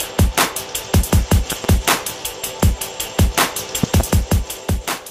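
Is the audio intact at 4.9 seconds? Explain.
Yes, the audio at 4.9 seconds is intact, with no dropout, click, distortion or other fault at that moment.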